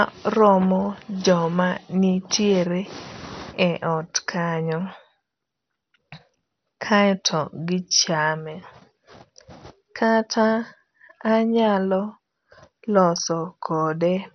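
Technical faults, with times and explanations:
Throughout, MP2 compression: dull, gurgling, granular speech with a hard spectrogram ceiling at 6.2 kHz, likely from starved sub-band bits, fitting roughly 48 kbps.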